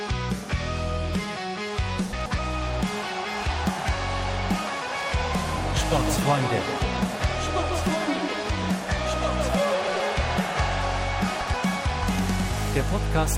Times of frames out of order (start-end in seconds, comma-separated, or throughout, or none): 2.13-2.39, 9.74-10.00, 11.41-11.54